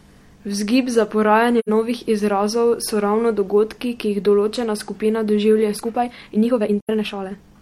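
At 1.59 to 1.69 s there is an AAC frame loss with muting. Roughly 85 ms of audio is missing, which fits two lost frames whose spectra the decoder zeroed. The overlapping windows fade the sound down and back up, leaving a soft-edged gap.

From 5.72 s to the end, the speech suddenly runs about 1.57 times faster with its pitch unchanged, sounding rushed. The likely cause is a time-stretched section, compressed by dropping short pieces of audio while keeping the pitch.

A second identical frame-loss gap, again about 85 ms and consistent with two muted frames, falls at 6.81 to 6.90 s, inside the sped-up part.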